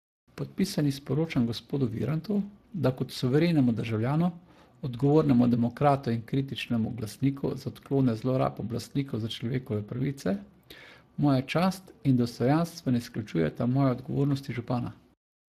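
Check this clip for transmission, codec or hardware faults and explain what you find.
One fault runs through the whole clip: Speex codec damage, from start to finish. Speex is a CELP coder that models speech with a predictive filter and a coded excitation. Here the damage is plainly audible, pointing to a setting of roughly 22 kbps, where the excitation is too coarse to rebuild the signal faithfully. The speech sounds noisy and hoarse, and nothing is present above 15.3 kHz.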